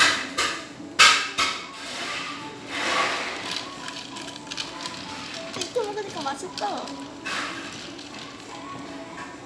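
No technical faults are audible.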